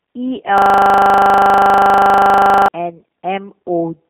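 Speech heard through the G.729 codec, with a system hang loop in the middle. The G.729 coding runs throughout: the line band sits at roughly 150 Hz to 3.5 kHz with nothing above 3.6 kHz, and the speech has the slightly rough, synthetic, buzzy texture of a low-rate model-based codec, which fits an 8 kbit/s G.729A stream. That roughness is what separates it from a simple telephone-band filter, which would sound dull but clean. From 0.58 to 2.68 s the system hang loop takes over: one 40 ms slice of audio repeats exactly, 53 times, giving a machine-gun stutter at 25 Hz while the computer or driver is frozen and the sound hardware keeps replaying its ring buffer. Packet-loss concealment would fade or vary across the gap, but here every cycle is identical and perfectly regular.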